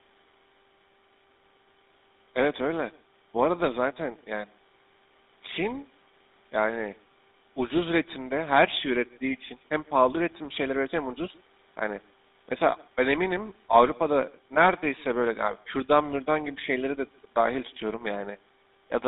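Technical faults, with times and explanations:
Throughout, echo with no canceller: your voice returns about 150 ms later, roughly 28 dB down, a faint shadow from the far loudspeaker leaking into their mic.
Throughout, GSM full-rate codec: speech is squeezed into a 200 Hz to 3.7 kHz band with plainly audible buzzy, gravelly roughness from the pulse-driven vocal-tract model, which fits a 13 kbps rate.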